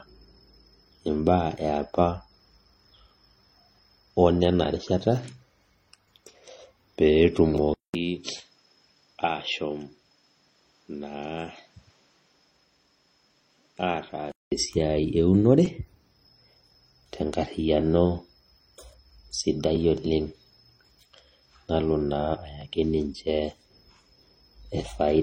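Speech with two faults. Throughout, the audio carries mixed artefacts that point to transcoding between lossy codecs, likely an MP3 stage at around 32 kbit/s re-encoded by HE-AAC at a similar rate. Smearing from the first encode is re-quantised with a second layer of swirl, and nothing sounds above 16.2 kHz. Unlike a single low-bitrate encode, two distinct artefact textures sit together, unchanged for the whole clip. From 7.74 to 14.52 s the input likely switched to a poorer device: after a 200 ms silence at 7.74 s, the band narrows to nothing above 8.3 kHz, the level drops by roughly 10 dB, and a new noise floor appears well below the speech. The silence, the fresh background noise and the tone change are what separate this from a codec bitrate drop, which would narrow the band without a gap or new noise. Full bandwidth and the original noise return at 14.52 s.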